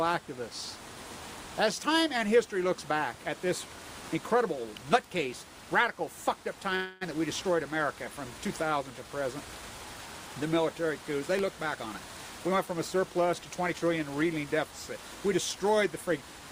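At 4.77 s an electrical switching spike appears, a sharp snap laid over the sound. It is likely an arc from a nearby switch, motor or static discharge coupling into the audio line, and a second snap follows at 11.39 s.

From 6.75 to 7.03 s a call audio freeze holds the sound as a fading buzz or hiss for about 0.26 s before it resumes where it stopped. This is likely delayed packets emptying the jitter buffer. The gap is inserted, and no audio is lost.

From 12.46 to 14.80 s a jitter buffer speed-up makes the sound run about 9% fast at unchanged pitch, so it comes across as hurried. The receiver trimmed short pitch-period slices repeatedly to shed the surplus buffered delay, roughly a fifth of a second in total.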